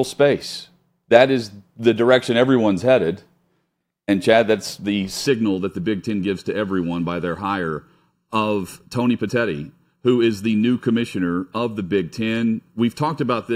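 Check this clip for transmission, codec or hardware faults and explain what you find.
One fault is present. From 5.27 s to the end, the speech shows channel delay (comb filtering). One channel lags the other by roughly 0.7 ms before mono summing. Shared sound cancels at evenly spaced frequencies, the first near 700 Hz. The voice turns hollow and phasey.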